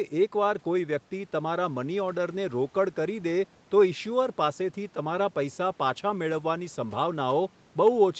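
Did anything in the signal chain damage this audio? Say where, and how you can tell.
No, nothing in the signal chain damaged this audio; the call's microphone processing and the Opus call path, which limits the sound to about 8 kHz, both behave as expected.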